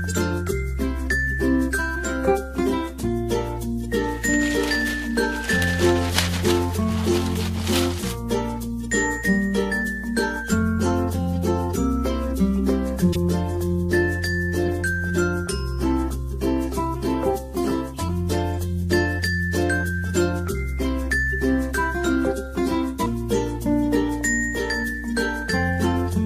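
At 13.12 to 13.18 s, a corrupt frame decoded shows up as a sharp, loud chirp. Flipped bits in the compressed data were played anyway. Wrong gains and misread codes put energy at the wrong frequencies. The length points to about two damaged frames. A second, quieter squeak follows at 14.66 to 14.69 s, again fitting roughly two frames. At 24.21 s a faint single blip suggests one bad frame.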